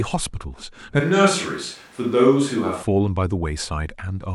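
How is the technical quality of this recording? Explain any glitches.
One glitch affects the speech. Switch to a distant microphone, 1.00 to 2.83 s: the close microphone likely dropped out, leaving a farther one, so the voice abruptly turns hollow and roomy, about 5 dB quieter, with more noticeable background noise, before snapping back.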